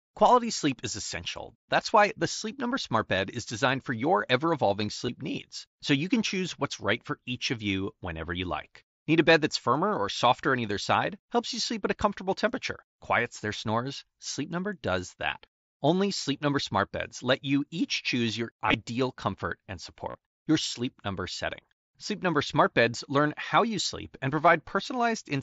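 Speech carried over a wideband mSBC Bluetooth headset link shows concealed Bluetooth headset packet loss three times. At 5.07 s, between "for your ever evolving" and "needs so you can", about 15 ms is patched. From 18.66 to 18.74 s, after "you each choose your", 45 ms of short losses scattered over 75 ms are patched. From 20.10 to 20.15 s, after "comfort and", 45 ms is lost, producing a brief buzzy, held tone and a slight warble as real audio resumes. Unlike a plain dropout, there is no silent gap, because the receiver fills each hole by repeating recent waveform.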